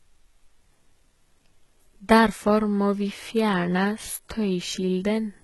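From the start the speech has that heavy low-bitrate codec sound: treble that's bright but not quite real, with gritty, lispy s sounds and nothing above 11.8 kHz. That's likely HE-AAC compression, with band replication faking the top end at something like 16 kbps.

At 2.46 s a faint switching supply whistle comes in and stays to the end. It's a thin high tone around 10 kHz, wandering between about 9.7 and 10.8 kHz as the supply's load shifts, sitting well down, roughly 45 dB under the speech.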